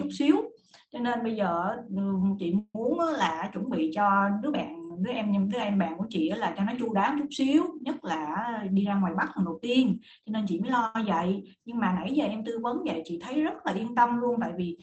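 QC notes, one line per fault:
2.58 to 2.76 s, call audio freeze: sound holds as a fading buzz for about 0.16 s, ending in brief silence, likely from packets stalling in transit; nothing lost, unlike a dropout.
8.39 to 10.63 s, jitter buffer speed-up: speech runs about 7% fast at unchanged pitch, roughly 150 ms trimmed in pitch-period slices to shrink built-up delay; hurried, not chipmunk-like.
10.86 s, short stall from a late packet: one sound is stretched about 86 ms until the late packet lands, then continues; shorter than a freeze, no silence.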